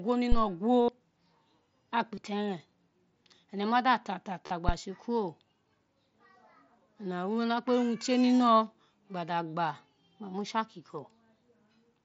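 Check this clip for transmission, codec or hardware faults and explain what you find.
Two kinds of fault appear in this speech clip, carried over the mSBC wideband headset codec with its light graininess: two phantom power thumps and three concealed Bluetooth headset packet losses.

Phantom power thump, at 0.32 to 0.46 s and 4.69 to 4.75 s. A supply switched on a live input sends a voltage step through the coupling capacitors. The result is a deep, low thud, dying away in about 31 ms the first time and 14 ms the second.

Concealed Bluetooth headset packet loss, at 0.82 to 0.89 s, 2.15 to 2.17 s and 4.47 to 4.51 s, lasting about 68, 22 and 38 ms. Audio packets from the headset went missing, and the receiver filled each gap by repeating the best-matching recent stretch of waveform. This gives a brief, buzzy, held tone in place of the real sound.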